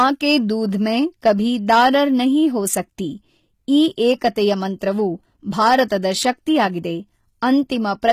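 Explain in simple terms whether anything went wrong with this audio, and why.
Hard clipping occurs at 0.00–0.36, 1.26–1.32, 1.70–1.96, 3.75–4.28, 5.61–5.82 and 8.08–8.11 s. At those moments the speech was louder than some stage could carry, so its loudest points were sliced flat, adding distortion that lands on those loud moments.

The treble has plainly audible compression damage throughout, likely from HE-AAC compression. That codec keeps only the lower frequencies and fakes the treble by copying lower sound upward. Nothing survives above about 15 kHz, and s sounds come out gritty, metallic or lispy.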